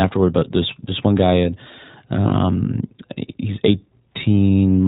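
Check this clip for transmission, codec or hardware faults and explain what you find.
Two faults are present: iLBC coding across the whole speech clip, and one short dropout concealed by the decoder.

The iLBC codec runs throughout. It codes each 20 ms frame's excitation independently, consistent with its 15.2 kbps mode. The damage is plainly audible as a rough, slightly synthetic voice. On a spectrogram, everything stops sharply at 4 kHz, with a smeared harmonic texture below.

Lost iLBC frames occur from 0.40 to 0.43 s, just before "this this one", most likely a single missing 20 ms frame. The decoder fills the gap by repeating the last pitch cycle mixed with noise, which sounds like a brief buzzy hold. The waveform shows a short run of near-identical periods. The spectrogram shows flat, blurred harmonics, then a clean recovery.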